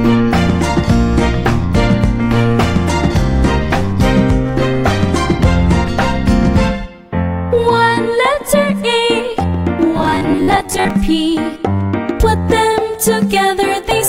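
From 9.98 s to 10.90 s the audio turns into a rigid, metallic buzz at 93.8 Hz: robotic sound from repeated short buffers. The likely cause is a repeated segment of about 10.7 ms, filling roughly half the span while real audio is skipped.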